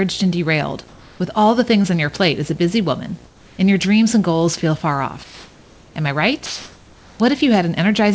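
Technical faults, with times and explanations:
throughout: video or display buzz. A steady buzz at 59.94 Hz, the picture's field rate, with hash above it and a high whine near 15.7 kHz from the line rate, all sitting roughly 25 dB under the speech. That's a screen or video cable leaking into the audio.
0.88–1.20 s, 3.26–3.58 s, 5.24–5.96 s, 6.46–7.20 s: comfort noise in place of the background. In the pauses after "and derailed" and after "as a busy woman", and in the two later gaps, the real room background drops out and is replaced by flat, featureless hiss. It's about 1 dB quieter in the first, about 4 dB quieter in the second, about 1 dB quieter in the third and about 2 dB louder in the last. Likely the sender's voice detector stopped transmitting during silence and the receiver filled in synthetic noise.
1.82–1.86 s: short concealed packet loss. Right after "derailed with all the" and before "on your plate as", about 20 ms of audio never arrived. 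The receiver stretched the preceding sound to cover the hole and blended back, so you hear a brief smear or wobble there.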